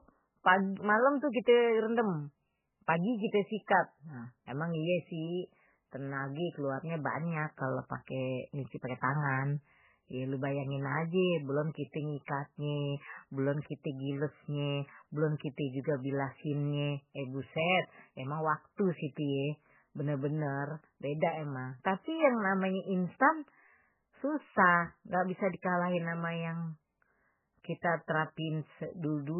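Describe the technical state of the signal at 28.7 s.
At 28.7 s the speech sounds dull and watery, with a swirling, warbling texture and smeared consonant onsets, and nothing reaches above 3 kHz. This damage runs through the whole clip, not just this moment. The likely cause is heavy MP3 compression, which fits a bitrate as low as 8 kbps. Starved of bits, the encoder cuts the treble at a fixed point and drops weaker frequency components that flicker in and out from frame to frame.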